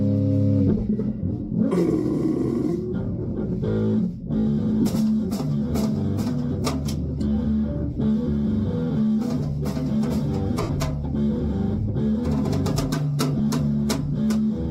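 Lost LE Audio frames occur at 1.20 s, 4.81 to 4.86 s, 7.93 to 7.97 s, 10.62 to 10.70 s and 13.38 s, with gaps from 7.5 ms to 75 ms that fit dropped 7.5 ms frames. For each gap, the LC3 decoder fills in by replaying the last spectrum with randomised signs, so tonal content smears into a brief noisy wash. On the longest dropout, at 10.62 s, the concealment fades toward silence before the sound resumes.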